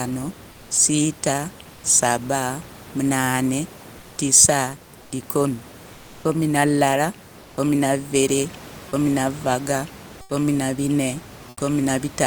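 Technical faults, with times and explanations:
0.51–0.69, 1.73–1.83 (just before "saba munane"), 3.99–4.17 (just after "saba munane"), 5.01–5.11, 5.93–6.23, 7.41–7.57, 10.21–10.29 and 11.49–11.57 s (after "na gane"), comfort noise in place of the background: during these 80–300 ms pauses, the real room noise, about 23 dB below the speech, gives way to a flat, featureless hiss about 2–3 dB quieter (about 8 dB at 10.21 s). The likely cause is Opus discontinuous transmission: the sender stops transmitting when no speech is detected, and the receiver fills the gap with synthetic noise.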